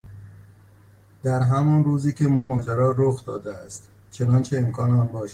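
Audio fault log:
2.35–2.68 s: repeated packet loss (robotic sound). Four gaps arrive in quick succession, the longest 140 ms. About half this stretch is concealed by stretching the last sound forward. That patching gives a choppy quality, and 80 ms is simply missing.
2.75–3.14 s: jitter buffer slow-down. The receiver repeats short pitch periods to rebuild its reserve, adding 55 ms. Playback runs at 88% speed while the pitch stays put. Sounds are drawn out.
2.80–4.46 s: call bitrate drop. The encoder falls from 32 kbps to 18 kbps, holding the low rate for about 1.5 s. Coarser coding at that rate makes the sound rough and watery until it recovers.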